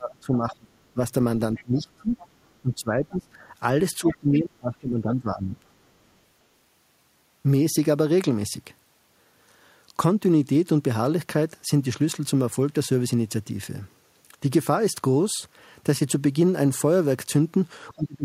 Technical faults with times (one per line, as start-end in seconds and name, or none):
0.00-1.01 speech suppressed in double talk
0.50-0.54 other side's voice leaking through
1.55-1.63 other side's voice leaking through
1.63-3.43 speech suppressed in double talk
2.18-2.26 other side's voice leaking through
4.00-5.74 speech suppressed in double talk
4.07-4.37 other side's voice leaking through
17.91-18.25 speech suppressed in double talk